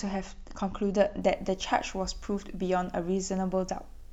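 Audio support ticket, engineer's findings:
Video or display buzz from 1.21 s to end of speech clip. Buzz at 75 Hz field rate with hash above, roughly 35 dB under the speech. Screen or video cable coupling into the audio path. 75 Hz fits no mains harmonic, so not hum.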